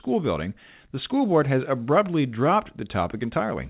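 No faults are audible in this speech, and the content stopping at 4 kHz is consistent with a narrowband call path such as G.711 mu-law.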